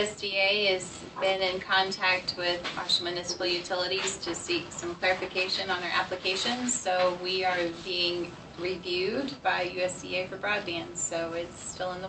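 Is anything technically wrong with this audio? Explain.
No, nothing's wrong here; it sounds like it came through an ordinary call connection, and the top end topping out around 8 kHz is just what that kind of Opus-coded path does.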